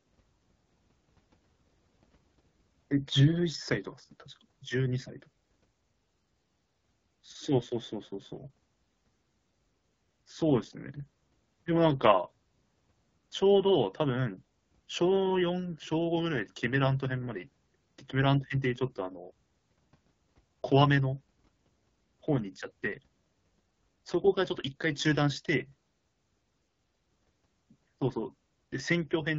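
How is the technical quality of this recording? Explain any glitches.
The quality is limited by one fault running through the whole recording: AMR wideband (HD Voice) codec damage. From start to finish the speech sounds rough and raspy. The codec models speech up to 6.4 kHz with a pulse-driven vocal tract and fills the top band with shaped noise. The roughness points to one of its two lowest rates, around 8.85 kbit/s.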